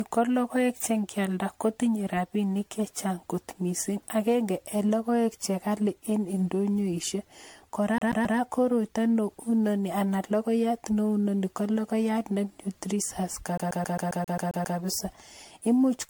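Throughout, the speech shows generation loss, likely from around fifteen successive MP3 decode and re-encode passes near 100 kbit/s, each requantising on a shifted frame grid. The result sounds swirly, hollow and smeared, with blurred attacks and nothing above 19.9 kHz. At 7.98 to 8.38 s and again at 13.58 to 14.78 s, a CD stuck on one turn makes the laser jump back each revolution, repeating one 134 ms slice with brief mutes. This produces a rapid, even stutter, three repeats first and nine later.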